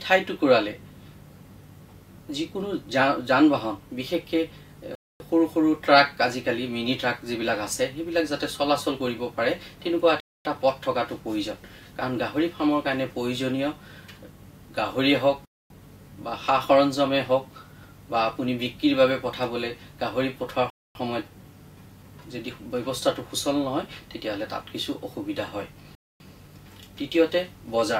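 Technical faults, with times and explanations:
4.95–5.20 s, 10.20–10.45 s, 15.45–15.70 s, 20.70–20.95 s and 25.95–26.20 s: gap between chunks. 250 ms silences recur every 5.25 s, one after each 5-second chunk, interrupting the sound at each join without losing any.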